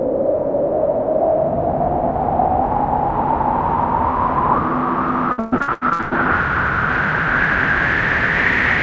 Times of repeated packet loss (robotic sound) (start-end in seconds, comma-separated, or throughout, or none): 5.32-6.13